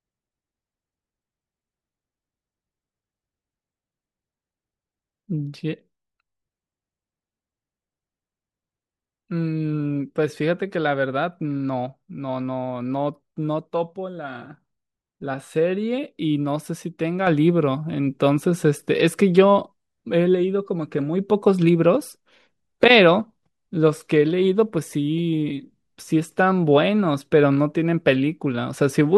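At 17.27 s the speech and its background noise step up together by about 6 dB and stay at that level to the end, a sudden gain jump. The likely cause is a digital gain change applied instantly between samples, with no ramp.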